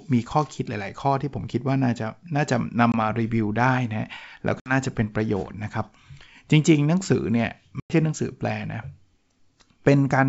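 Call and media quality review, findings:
Packet loss on ADPCM call, 2.92–2.95 s, 4.60–4.75 s, 7.80–7.94 s. Dropped packets are replaced with silence, leaving hard-edged holes of 20, 60 and 100 ms. The decoder's predictor and step size fall out of step with the sender's, so speech returns distorted until they resync. The G.722 wideband path itself sounds clean.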